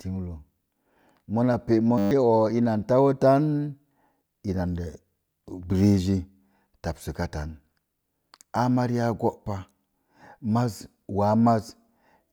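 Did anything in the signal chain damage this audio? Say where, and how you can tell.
Yes. From 1.98 to 2.11 s the speech becomes a steady 100 Hz buzz: one 10 ms slice repeating 13 times, with roughly 150 ms of audio lost. This is a system hang loop at the driver/buffer stage. The host froze while the hardware kept replaying its ring buffer.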